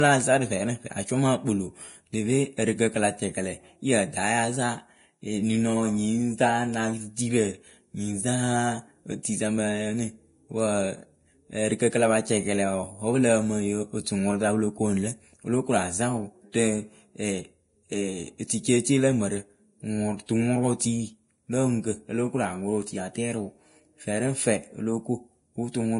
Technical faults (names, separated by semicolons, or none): low-bitrate audio saved at a high bitrate